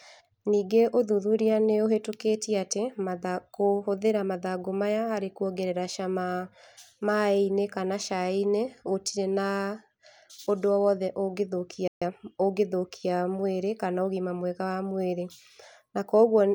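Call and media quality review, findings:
Playback stall, 11.88–12.02 s: speech cuts out mid-flow for about 138 ms, then resumes. Flat silent gap in the waveform, a blank vertical band across all frequencies on the spectrogram. Likely player buffer underrun or blocked audio thread.

Time-compressed catch-up, 12.02–12.14 s: speech hurried at 2x rate, pitch unchanged. The player trims its backlog by splicing out short segments and cross-fading the rest. Spectrogram shows harmonics at normal spacing, but syllable patterns are squeezed.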